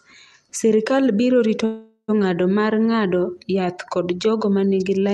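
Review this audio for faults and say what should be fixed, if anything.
A call audio freeze from 1.65 to 2.10 s likely comes from delayed packets draining the jitter buffer. The last sound is stretched into a fading buzz or hiss, then about 60 ms of silence, before the speech resumes intact. Unlike a dropout, nothing is lost; the rest of the clip is simply pushed about 0.43 s later. A deeper adaptive jitter buffer and a steadier network route would keep late packets from emptying the buffer.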